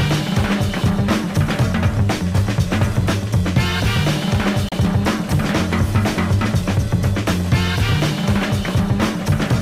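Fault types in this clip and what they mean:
Digital broadcast dropout: the receiver stopped getting usable frames, through signal loss or failed checksums, and muted its output until valid data resumed, so the material carried in that stretch is gone rather than concealed. In this clip the sound drops to silence from 4.69 s to 4.72 s, a single short hole of roughly 32 ms that points to one lost frame, after which the audio picks up further along in the programme.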